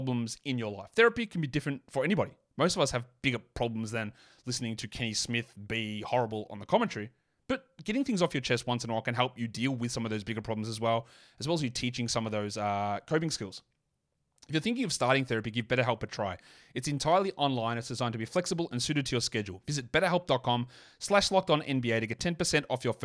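No technical faults are audible.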